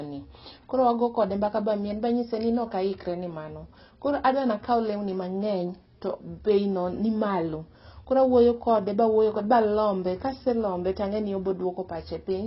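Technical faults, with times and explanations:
Throughout, AAC compression: the speech was likely squeezed through a low-bitrate AAC-LC encoder, consistent with around 16 kbps, which discarded everything above 5.6 kHz and coarsely quantised the rest, leaving the voice dull, smeared and heavily damaged, with a warbling, fizzy edge.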